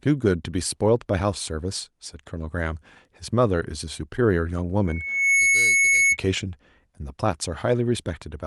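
A speech clip with a loudspeaker feedback squeal from 4.87 s to 6.17 s: a single tone at 2.2 kHz swells over roughly half a second and settles at around 5 dB above the speech before it cuts off. The mic is hearing the speaker it feeds, and at that one frequency the loop gain tops one, so the tone keeps feeding itself. The call codec's top end stops around 12 kHz, which fits Opus at a moderate bitrate.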